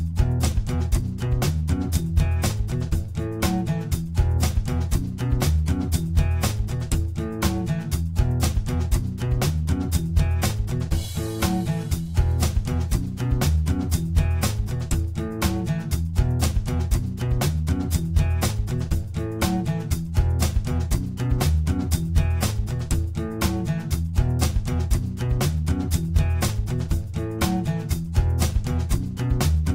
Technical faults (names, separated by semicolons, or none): periodic USB or driver dropouts